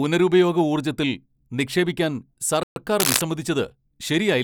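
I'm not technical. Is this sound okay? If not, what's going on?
No. A playback stall is the likely cause of the first problem: the player probably ran short of data and briefly went quiet. The speech cuts out from 2.63 to 2.76 s, a gap of about an eighth of a second, then carries on.

Shortly after, cable scratch noise appears, most likely from a worn cable or plug being moved. From 2.99 to 3.22 s there is a rough scratching, rustling burst of noise about as loud as the speech itself.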